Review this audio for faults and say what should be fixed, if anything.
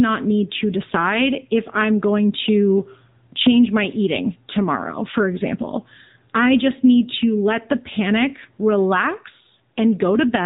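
The whole clip carries AMR narrowband mobile codec damage, and it's plainly audible: everything above 4 kHz is gone, and the speech has that buzzy, synthetic edge you get when a vocal-tract model is rebuilt from a handful of pulses per frame. That points to an upper-middle mode, around 8 kbps. To prevent it, capture or route the call through a wideband path, or at least a higher AMR mode.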